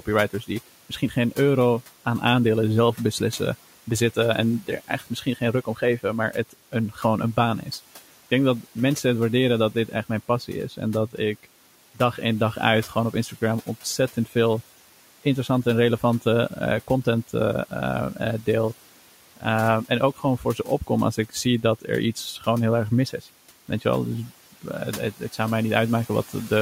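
Between 4.62 and 5.82 s, and again from 20.16 to 20.67 s, the speech is cut by the noise suppressor. It mistakes quiet speech for the room noise sitting about 22 dB below, pulling brief stretches down by about 12 dB and about 11 dB, so those parts sound swallowed.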